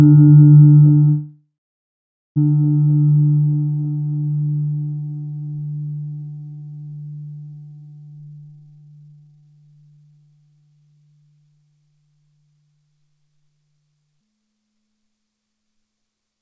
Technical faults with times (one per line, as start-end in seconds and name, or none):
1.10-2.38 call audio freeze
8.11-10.27 jitter buffer speed-up
14.21-16.41 section at the wrong speed